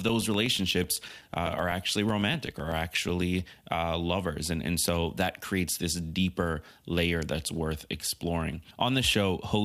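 A speech recording with periodic USB or driver dropouts from about 0.09 s to 3.35 s: every 0.125 s, roughly eight times a second, a few milliseconds of audio is replaced by silence, around thirty gaps in all. This evenly spaced loss points to a background task repeatedly stalling the USB bus or audio driver. The result is a steady ticking under the voice. The waveform shows short flat gaps at regular spacing, and the spectrogram shows thin vertical stripes with broadband clicks at their edges.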